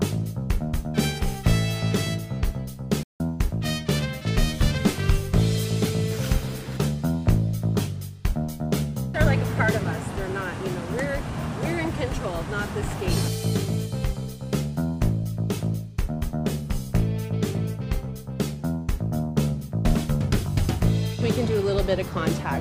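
The audio has a playback stall at 3.03 s: sound cuts off mid-flow and stays silent for about 0.17 s before resuming at 3.20 s, likely because the player ran short of data or was blocked. A waveform shows a flat gap, and a spectrogram shows a blank vertical band.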